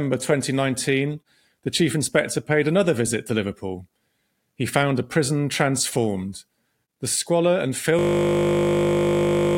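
A system hang loop takes over this speech recording at 7.99 s, right after "squalor and", and runs to the end. The machine or driver froze while the sound hardware kept replaying the same 20 ms stretch of its ring buffer, repeating it 79 times. Because the loop is so short, it is heard not as a stutter but as a steady 50 Hz buzz replacing the speech for the final stretch.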